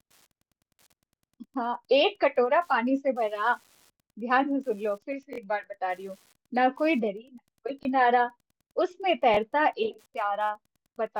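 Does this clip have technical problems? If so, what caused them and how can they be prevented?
Yes. Wi-Fi interference runs through the whole recording as a faint, steady ticking about ten times a second, well below the speech at roughly 40 dB down. The 102.4 ms spacing of the ticks matches a Wi-Fi beacon. A nearby radio's transmissions are being picked up and rectified by the audio circuitry, turning each beacon burst into an audible click. To prevent it, keep routers, phones and Wi-Fi modules away from microphones, preamps and unshielded cables, and use shielded, well-grounded connections.

A repeated buffer occurs at 5.33–5.38 s, where the same short fragment plays three times in a row, and again at 7.83–7.85 s and 9.34–9.37 s, where a fragment plays twice. Each repeat is about 21 ms long, which fits a 1024-sample buffer. New audio arrived late, so the device replayed the last block. 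This produces a brief stutter with hard joins and drops roughly 40 ms of speech at the first spot and about 20 ms at the others. To prevent it, use a larger buffer or reduce CPU and transfer load so data always arrives in time.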